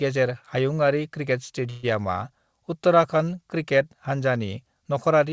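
A speech recording carried over a call path, with nothing above 8 kHz on a spectrogram, has a call audio freeze from 1.70 to 1.85 s. About 130 ms of fading buzz or hiss continues the last sound, and then speech resumes with nothing lost, only delayed. This was likely because packets stalled and the jitter buffer ran dry. On a spectrogram it appears as a smeared, decaying copy of the preceding spectrum, and the waveform shows a shrinking, repetitive tail.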